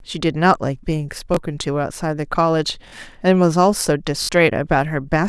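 Speech, hit three times by a repeated buffer: new audio failed to arrive in time, so the device replayed its last block of about 21 ms, which fits a 512-sample buffer. Each repeat adds a hard join, heard as a short stutter or buzzy click. At 1.34–1.37 s the block plays once extra, at 2.88–2.92 s twice, and at 4.22–4.29 s three times, masking roughly 20, 40 and 70 ms of speech.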